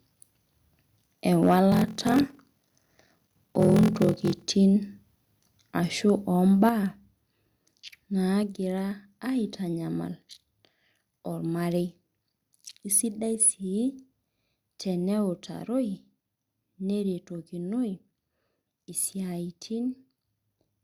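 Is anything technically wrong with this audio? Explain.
Yes. Three kinds of fault are audible.

Microphone overload occurs at 1.42 to 1.54 s and again at 3.6 to 3.71 s, with peaks pushed about 3 dB and about 2 dB past the converter's limit. The flattened tops give the loudest syllables a harsh, crackling edge, likely from the input volume being set too high for the converter.

A block size mismatch (padded) runs from 1.7 to 4.43 s. Each block arriving is shorter than the 1024 samples the next stage reads, so the remainder is zero-filled. This leaves a short gap in every block, producing a 43.1 Hz buzz, and stretches the audio to 0.861 times normal speed while the timbre stays.

The microphone volume steps down at 6.69 s, 8.43 s and 15.33 s, by about 6 dB, 3 dB and 2 dB. At each point the voice and the background drop together, abruptly rather than gradually. The likely cause is the call software lowering the device's input gain in single steps after finding it too hot.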